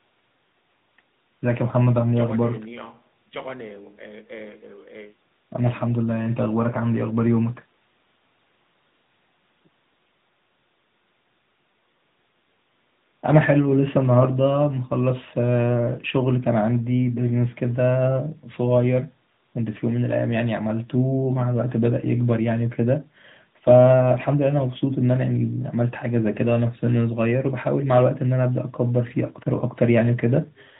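From start to finish the speech carries AMR narrowband mobile codec damage, plainly audible. Band-limited at 4 kHz, it loses the upper sibilance and air, while the pulse-driven vocal-tract model, at a rate consistent with roughly 10 kbps, lends every syllable a thin, buzzy, synthetic edge.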